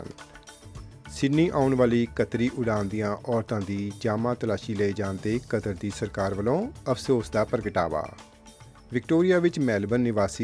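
No technical faults are audible anywhere in the recording.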